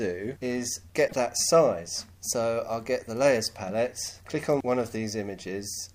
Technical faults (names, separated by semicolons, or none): damaged data in a compressed stream